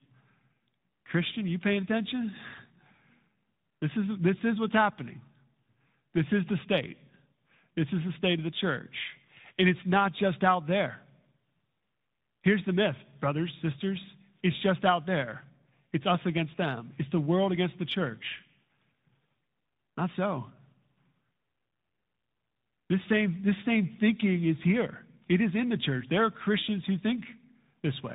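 Speech with tandem speech coding throughout. It sounds rough, muffled and warbly, which fits passing through two speech codecs in a row, AMR-NB at around 10.2 kbit/s and then G.726 at around 40 kbit/s, with a G.711 link between them. Each coder re-encodes the previous one's degraded output, so the errors compound. A spectrogram shows nothing above 3.8 kHz and smeared, grainy harmonics, and the waveform carries a fine noise floor under the speech.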